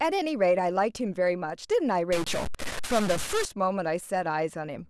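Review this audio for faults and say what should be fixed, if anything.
From 2.12 to 3.45 s the speech turns harsh and buzzy. The likely cause is a stuck bit: one data bit held at a fixed value shifts about half the samples by a step of around -25 dBFS, in a pattern following the waveform.

Verify converter wiring and run a bit-pattern test on the data path before recording.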